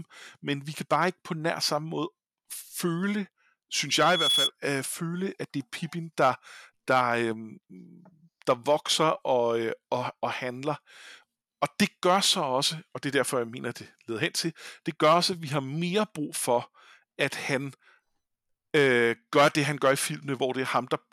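A 3.4 kHz tone swells over under half a second into a squeal above the speech from 3.89 to 4.51 s, just before "øh føle at det". This is loudspeaker feedback squeal, where the microphone picks up its own loudspeaker and the loop gain exceeds one at that frequency.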